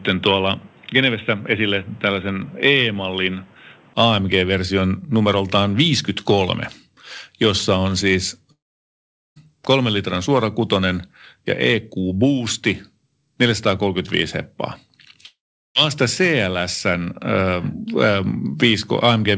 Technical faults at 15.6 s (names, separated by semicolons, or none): long network dropout